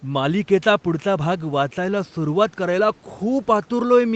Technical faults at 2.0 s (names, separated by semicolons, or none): none